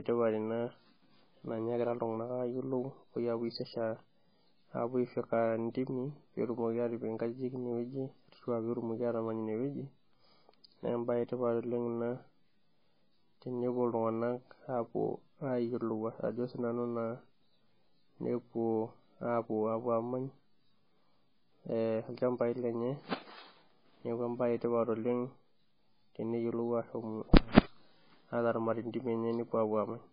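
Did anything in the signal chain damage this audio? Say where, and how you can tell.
Yes, at the codec stage, across the whole speech clip. The treble stops dead at 5 kHz, and below that the sound is watery and swirly, with metallic chirps on s sounds and smeared consonant attacks. That points to heavy damage from likely MP3 compression at a very low bitrate, around 16 kbps. Starved of bits, the encoder cuts the top band and drops weak frequency lines that flicker on and off between frames. A simple low-pass filter would dull the sound without that shifting, warbling texture.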